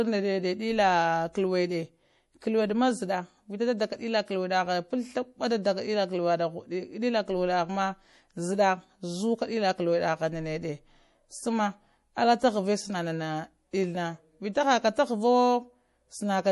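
Throughout the speech, plainly audible damage that is likely MP3 compression: nothing survives above 11.5 kHz, and starved weak frequency lines flicker in and out, giving a watery, swirly sibilance, which fits a bitrate around 48 kbps. A spectrogram shows a flat ceiling and patchy, blinking high-frequency detail.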